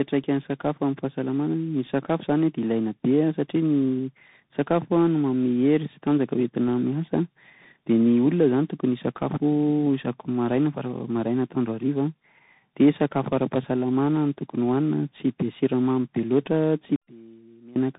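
Throughout, the call passed through several speech codecs in tandem, each re-encoding the last one's degraded output, with CVSD among them. The result is rough, noisy speech with nothing above 3.8 kHz.

From 16.96 to 17.76 s, one stereo channel is likely inverted in polarity, so the shared centre content cancels when the channels sum to mono. The sound drops by about 25 dB, leaving only a faint residue.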